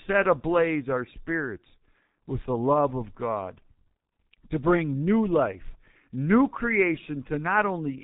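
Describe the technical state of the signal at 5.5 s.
G.723.1 codec damage is present at 5.5 s, as it is throughout the speech. The codec rebuilds the voice from a slowly updated model in long frames and passes nothing above 3.8 kHz; the result sounds muffled and hoarse with smeared consonants, which fits a rate near 6.3 kbit/s.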